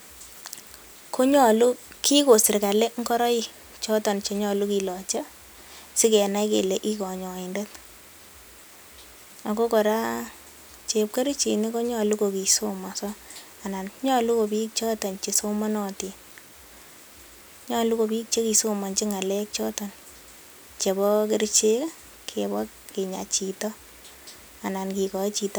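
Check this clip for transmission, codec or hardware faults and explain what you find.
No transmission, codec or hardware faults can be heard anywhere in the speech recording.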